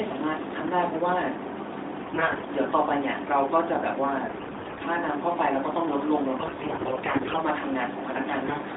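Speech carried over AMR narrowband mobile coding, with its line band of about 250 Hz to 3.7 kHz, suffers AMR bit errors at 2.02–2.47 s, 4.28–4.83 s, 6.38–7.41 s and, heavier, 8.46–8.59 s. Roughly one bit in ten of the weakly protected frame data is corrupted, about 15% in the last burst, which misplaces the excitation pulses and skews fine pitch, gain and spectral values. The voice holds its pitch and loudness but turns hoarse, scratchy and gargly.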